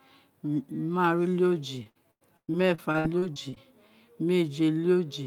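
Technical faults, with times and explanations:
1.83–3.58 s, repeated packet loss (robotic sound): the speech turns choppy, with pieces dropping out about a dozen times in under two seconds. Each dropout is bridged by stretching the last bit of sound, and another hole follows before the voice recovers. Roughly 490 ms is patched this way, about 28% of the stretch. Another 520 ms is simply lost, with the longest gap near 110 ms.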